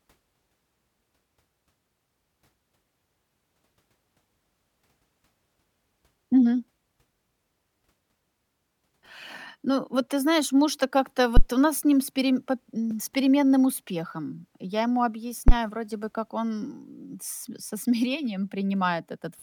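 Speech, interrupted twice by a phantom power thump. The first runs from 11.37 to 11.42 s, just before "у нас с ним". The second runs from 15.48 to 15.54 s, just before "вроде бы как он". Each is a deep, low thud peaking at about -5 dBFS and dying away within 12 ms. The cause is a supply switched on or off on the live input. That voltage step passes through the coupling capacitors into the signal.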